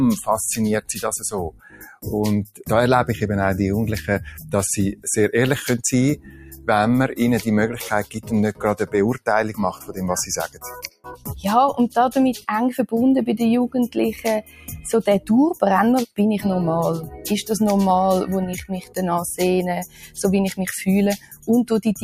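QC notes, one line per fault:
Throughout: noise suppressor applied to music or sounds. A suppressor tuned for speech stayed active and classed sustained tones, ambience and decays as noise. Its gain swings by around 15 dB, so onsets pass while held sound and tails sink, pumping and thinning.
0.81–2.66 s, 4.27–5.06 s, 6.16–6.68 s, 8.04–11.45 s, 13.88–17.29 s, 18.53–20.19 s, 21.17–22.04 s: sound cut by the noise suppressor. Steady and fading passages were pulled down by about 15 to 20 dB, deepest in 8.04–11.45 s. Decays end early, while sudden attacks mostly survive.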